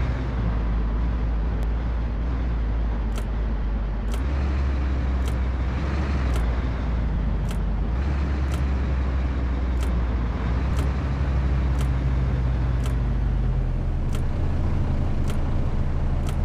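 At 1.63 s and 7.47 s, a block of digital silence drops in. Each gap lasts about 0.73 ms, fitting a 32-sample block left unfilled. Both sound like sharp ticks.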